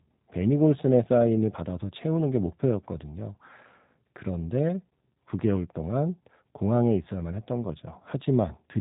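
From start to finish, the speech carries G.729 codec damage, and it is plainly audible. Nothing above 3.8 kHz survives, so consonants lose their crispness. The codec does not send the waveform itself. It rebuilds each short frame from a vocal tract filter, a pitch predictor and a few coded pulses. That thin rebuild makes the speech sound slightly rough and synthetic. The sound fits an 8 kbit/s G.729A encoder.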